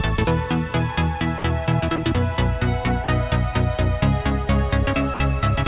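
At 1.38 to 1.44 s, 1.96 to 1.98 s, 3.04 to 3.08 s and 5.14 to 5.20 s, the sound briefly gives way to flat, steady hiss, likely sound dropped by the voice detector. The gaps hold even comfort noise rather than clicks or repeated fragments, which sets them apart from packet loss.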